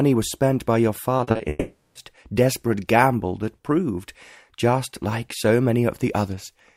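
From 1.17 to 1.41 s there is repeated packet loss with a robotic sound. Audio packets went missing four times in quick succession, the longest hole lasting 40 ms. Each time, the receiver filled the hole by extending the sound just before it. About half of this quarter-second is patched-in material, so the sound turns choppy and robotic, with small pieces missing and a mechanical, stuttering texture.

A longer break follows from 1.49 to 1.97 s, most likely a long network dropout that cut the incoming stream for nearly half a second. Across 460 ms, the last sound is stretched into a fading buzz or hiss. A brief stretch of silence of about 50 ms follows before the audio resumes, and the material from inside the break never comes back.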